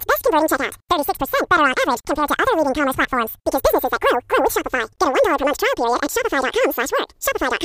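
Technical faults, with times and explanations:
Throughout, audio read two samples at a time (double speed): the speech plays at twice normal speed and a full octave (12 semitones) high, because each pair of samples got treated as one frame.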